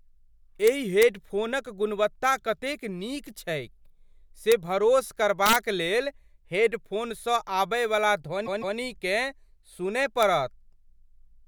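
A speech clip with two faults. Integer overflow cracks it violently at 0.67 to 1.03 s, 4.52 s, 5.46 to 5.56 s and 10.23 s. Peaks exceed the integer limit and wrap to the opposite sign instead of being limited, the worst by about 3 dB. Repeated frames cause a stutter from 8.45 to 8.77 s. A 156.7 ms block plays twice more, adding 313.5 ms.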